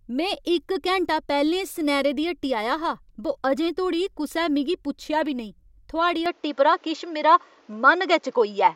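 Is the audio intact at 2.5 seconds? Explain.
Yes, the speech at 2.5 seconds plays through intact, with no dropout, click, distortion or other fault at that moment.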